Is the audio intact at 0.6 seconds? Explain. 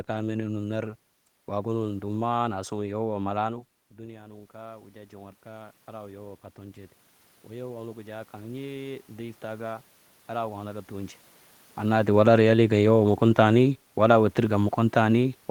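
Yes, at 0.6 s the audio is intact, with no technical fault at that point.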